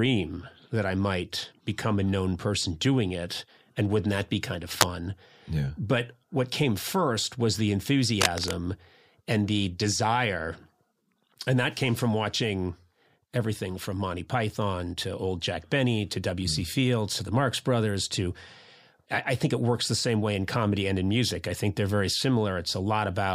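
A brief burst of scratchy, rustling noise, roughly as loud as the speech, cuts across the audio at 4.65 to 4.83 s, after "wouldn't that be kind", and again at 8.21 to 8.55 s, after "came first was the". This cable scratch noise likely comes from a worn lead or connector being moved.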